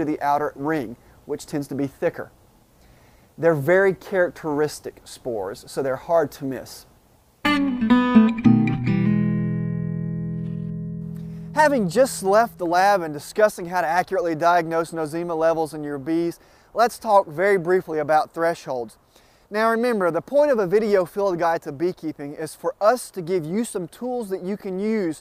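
No faults detected anywhere in this audio.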